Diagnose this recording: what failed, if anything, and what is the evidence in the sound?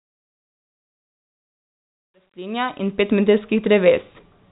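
Nothing failed in this recording, and the sound shows no evidence of a fault.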